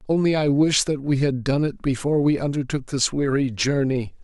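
No technical faults are audible.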